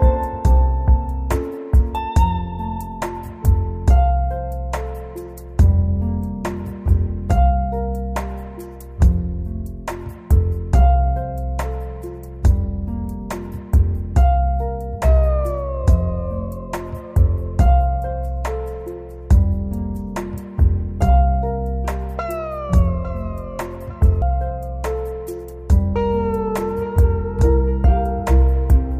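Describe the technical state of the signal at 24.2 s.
At 24.22 s there is damaged data in the compressed stream: corrupt frames make the decoder lose sync and resynchronise, producing a brief chirp or blip.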